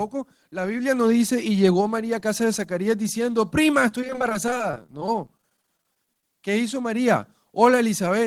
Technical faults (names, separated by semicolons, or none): repeated packet loss (robotic sound)